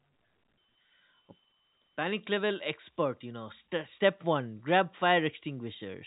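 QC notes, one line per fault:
No faults found; the speech runs over a G.711 A-law telephone path at 64 kbps, with the expected band limit near 3.8 kHz and at most a faint level-following quantisation hiss under the signal.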